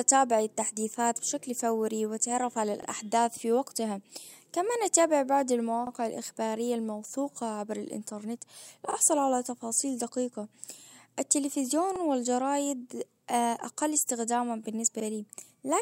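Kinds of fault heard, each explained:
Overlapping chunks: The speech is handled in 3-second chunks. Each new chunk starts 44 ms before the previous one ends. That short slice plays twice. You hear a brief stutter or click at 2.83 s, 5.87 s and 11.96 s.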